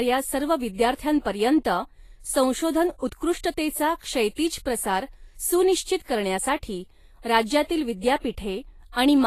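Throughout the speech, the treble is grainy and hissy, with nothing at all above 14.2 kHz, and the plainly audible damage is most likely Vorbis compression at a low setting, which fits a bitrate of roughly 33 kbps. The coder keeps a smooth spectral outline but quantises the fine high-frequency detail so coarsely that it turns into noise of similar energy. That noise-like roughness, rather than a clean, dull loss of highs, sets it apart from simple low-pass filtering.

From 5.97 to 6.00 s, a pre-echo puts a short hiss about 35 ms ahead of a sharp onset, which then sounds softened and smeared. The transform block containing that attack spread its quantisation noise across its whole length, so noise sized for the loud onset also fills the quiet gap just before it. Because the hiss comes before the attack rather than after it, it cannot be a reverb tail or a decaying echo.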